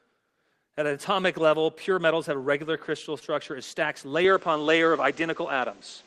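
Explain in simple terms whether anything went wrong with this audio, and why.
Two things went wrong. At 3.19 to 3.23 s there is a short concealed packet loss. A tiny piece of the speech arrived too late, so the receiver patched the gap, leaving a brief smear.

From 4.25 s to the end, the sound suddenly turns duller, with nothing above 8.3 kHz. The level shifts and a faint new background noise appears. There is no gap at the change. The likely cause is an input switched to a poorer device.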